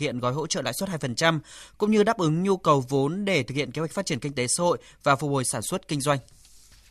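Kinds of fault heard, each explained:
No kinds of fault are heard in this speech.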